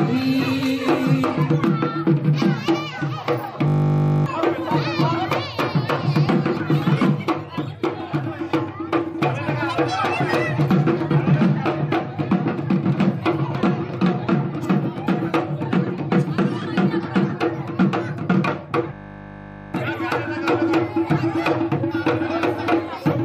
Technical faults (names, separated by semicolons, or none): system hang loop